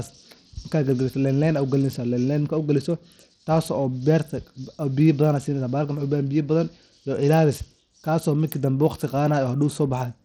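From start to finish the speech carries plainly audible codec damage. The treble thins out and flickers, and a gritty haze with some aliasing rides on the sound. It's most likely Bluetooth SBC compression at a low bit pool, something like 80 kbps. With so few bits, the encoder starves the weak upper sub-bands and coarsely quantises the rest, so the top end comes and goes and quantisation noise sits right on the speech.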